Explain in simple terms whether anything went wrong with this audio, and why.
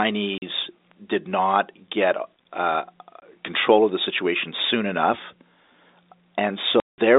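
The speech drops out briefly three times: a short gap from 0.38 to 0.42 s, a tiny one at 3.21 s, and a longer hole from 6.8 to 6.98 s. This is packet loss filled with silence. The audio travelled in small chunks, some never arrived, and the receiver played nothing in their place. The gap lengths fit chunks of about 20 ms each. The narrow telephone-line sound is simply the normal G.711 telephone coding.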